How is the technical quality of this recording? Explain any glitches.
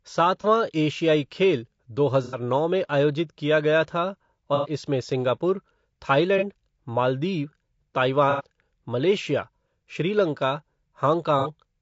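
The technical quality is clearly compromised: the speech carries constant codec damage and six brief dropouts.

Throughout, the speech sounds rough and grainy, with noise between the harmonics and a synthetic top band. This is likely low-delay AAC compression (AAC-ELD), and the plainly audible damage fits a bitrate around 32 kbps. Its short frames resolve pitch poorly. Unlike general low-bitrate blur, the coarseness fills the gaps between the voice's harmonics.

AAC frame loss with concealment occurs at 0.41–0.45 s, 2.24–2.38 s (right after "खेल दो"), 4.55–4.69 s, 6.38–6.43 s, 8.30–8.44 s (just before "मलेशिया श्रीलंका") and 11.39–11.49 s. Gaps last about 30, 60 or 90 ms. The decoder rebuilds the missing audio from the last good spectrum, producing smeared, noisy patches rather than the hard silence or clicks of plain dropouts.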